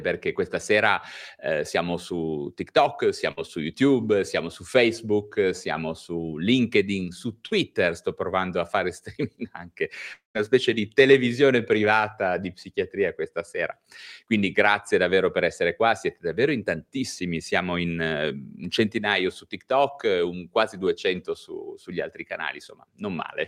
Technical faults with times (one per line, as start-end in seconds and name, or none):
3.31-3.39 burst of packet loss
7.47-7.53 short concealed packet loss
10.13-10.37 long network dropout